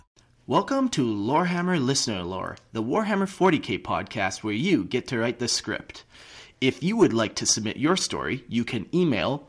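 No technical faults are audible.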